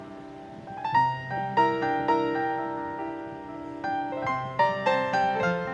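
A wrong sample rate runs through the whole clip: the audio plays back 1.5 times too fast and about 7 semitones too high, which fits 16 kHz material being played at 24 kHz without conversion, so pitch and tempo rise together, giving a hurried, chipmunk-like lift to everything heard.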